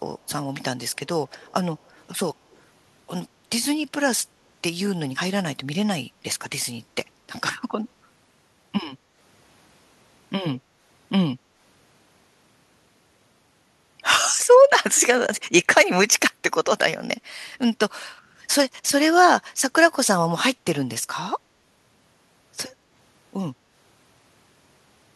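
At 1.3 to 1.53 s and again at 2.51 to 2.58 s, an echo leak: a very faint copy of the speech returns 135 ms late, likely because a far-end echo canceller let loudspeaker pickup through. Its fixed delay and brief, scrappy bursts set it apart from room reverberation's smooth decay.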